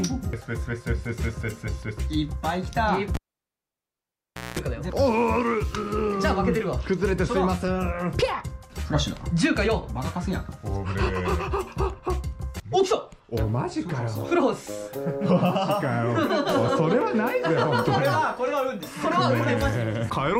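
At 3.14 s a cable is pulled and plugged in while the signal is live. A pop marks the contact breaking. Then the sound drops to near silence for about 1.4 s. As the plug goes back, only its tip touches at first. That leaves the input open to hum, so a 60 Hz mains buzz bursts through for about 0.2 s. A second pop follows at 4.59 s, when full contact returns and the sound comes back.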